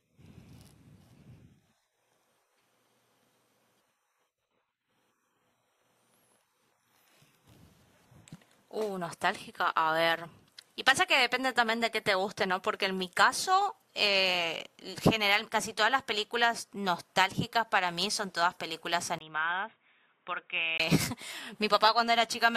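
Input likely switched to a poorer device from 19.18 to 20.80 s: after a brief gap the speech is cut above 3.8 kHz, quieter, and carries new background noise.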